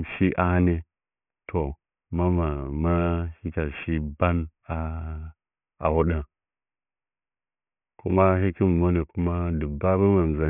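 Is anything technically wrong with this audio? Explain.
Yes. The speech has aliasing throughout. The sound points to a drop from 48 kHz to about 6 kHz with no low-pass filter first. Everything above the new 3 kHz limit folds back below it at unrelated frequencies, roughly 25 dB under the speech. Sibilants turn gritty and metallic. On a spectrogram, energy runs hard up to a 3 kHz ceiling, with mirrored streaks slanting the wrong way beneath it where fricatives occur.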